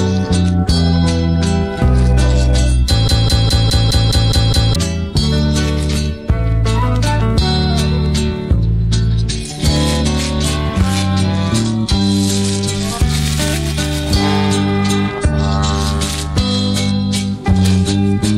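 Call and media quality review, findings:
Broken-record loop, 3.08–4.76 s. A 207 ms fragment repeats back to back eight times, with the intended audio in that span lost. Likely cause: a player or encoder stall re-sending its last held buffer. The waveform shows identical blocks tiled at 207 ms intervals. The spectrogram shows a repeating pattern with hard vertical seams at each restart.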